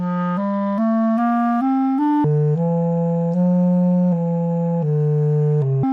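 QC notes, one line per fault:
2.24–5.83 s, section at the wrong speed: from 2.24 s the audio plays at about half speed (0.505x), so it drags and drops roughly ten semitones in pitch, speed and pitch falling together; likely a playback or edit clocked at the wrong rate for this segment.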